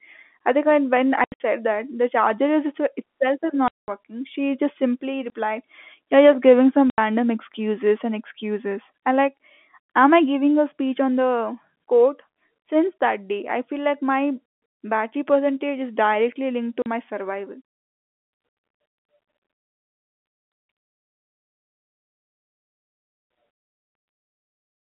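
Packet loss filled with silence punches holes at 1.24 s after "I think when when", 3.68 s, 5.3 s, 6.9 s after "giving some", and 16.82 s after "is directly linked to". Dropped packets were replaced with silence, so the gaps run from 20 to 200 ms in steps that fit 20 ms packets. They appear as dead-flat stretches in the waveform and as blank vertical bands across the spectrogram. Their edges are abrupt.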